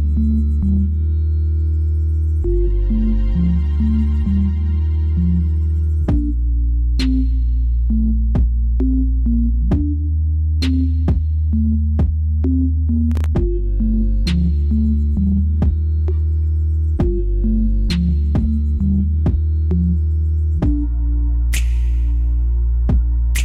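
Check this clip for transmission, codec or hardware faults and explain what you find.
One fault is present, a processor overload crackle. It runs from 13.12 to 13.26 s, lasting about 0.14 s. The processor could not fill its very short audio buffers in time. The spacing points to buffers of around a millisecond and a half, with a handful missed in a row. Each miss left a brief silent gap with hard edges. Together these gaps form a short burst of gritty crackle over the sound, which stops once the load clears.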